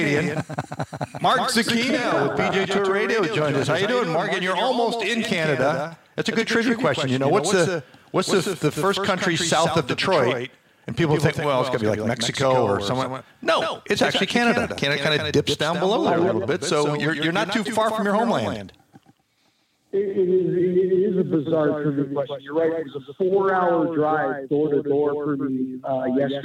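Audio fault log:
throughout, doubled audio track: a second, slower capture path likely mixes in a full-band copy about 150 ms late and about 5 dB quieter, giving a dry, flat slapback echo.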